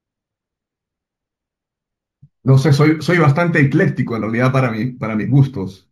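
Imaging from linear upsampling runs throughout this speech. The sound points to a 16 kHz source raised to 44.1 kHz by straight-line interpolation, which dulls the top of the band and leaves a faint mirrored copy between 8 kHz and 16 kHz, roughly 40 dB down, heard as a light metallic shimmer on sibilants.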